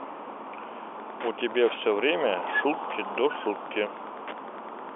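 From 0.95 s to the end, Wi-Fi interference appears: the audio circuit rectifies a nearby radio's beacon, sent every 102.4 ms, producing steady ticking about ten times a second, around 20 dB below the speech. A spectrogram shows evenly spaced thin vertical lines, and the waveform shows regular small spikes.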